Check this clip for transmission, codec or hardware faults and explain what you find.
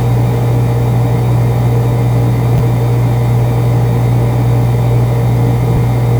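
Two brief faults turn up, both chunks out of order, at 2.58 to 2.60 s and again at 5.76 to 5.78 s. Each is a tiny jumbled stutter. In each case a 10 ms chunk arrived one chunk late and played after the piece that should have followed it. Nothing is missing, but the swapped order leaves three hard joins where the waveform jumps.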